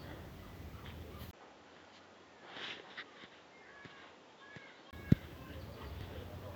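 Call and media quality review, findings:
Speech 1.31–4.93 s dulls, nothing above 7.6 kHz, about 10 dB quieter, faint new noise, 20 ms gap at switch. Likely input switched to a poorer device; level and noise shift rule out codec narrowing.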